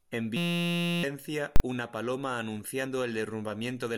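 A speech recording with three distinct technical faults. From 0.37 s to 1.03 s there is a system hang loop: the driver or host stalled while the audio hardware kept replaying the same ring buffer. A 5.8 ms fragment repeats about 115 times, which fits a 256-sample buffer. That produces a steady buzz at 172 Hz in place of the speech, and roughly 0.7 s of real audio is lost under it. At 1.56 s, invalid numbers at full scale appear: a processing stage output infinite or invalid values, which were clamped to the maximum sample value for a 40 ms block running to 1.60 s. The block holds the output flat at one extreme value, far beyond the speech peaks, so the listener hears a very loud pop at its start and another at its end, with no sound in the 40 ms between them. At 2.85 s, compressed frames skipped: the decoder did not play a chunk of the encoded stream, either because it was missing or because it was rejected as corrupt. 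The sound points to a single frame, around 20 ms of audio. The speech jumps forward by that amount at the join.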